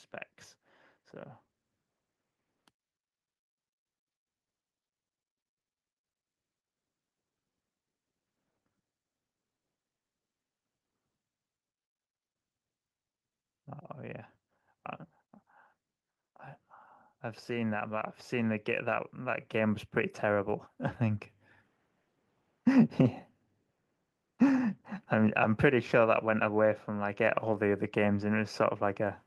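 Automatic gain rising from 17.46 s to 21.31 s: the gain control judged the incoming speech too quiet and pushed its gain up by about 10 dB over nearly four seconds. Because the boost is applied to the whole signal, the voice and the background noise swell together rather than the voice alone getting louder. The speech already carries the usual coding texture of an Opus-style call path, with high frequencies ending around 12 kHz.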